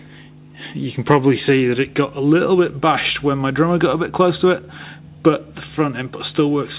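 No technical faults can be heard anywhere in the clip. It comes over a working WebRTC call path, and nothing reaches above 4 kHz, which fits narrowband G.711 mu-law coding at 64 kbps.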